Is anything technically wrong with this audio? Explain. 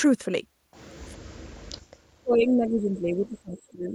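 Yes. Speech suppressed in double talk at 1.12–1.59 s and from 2.2 s to the end. The voice nearly vanishes at first, then sinks about 20 dB, likely because an echo canceller ducked it during overlapping talk.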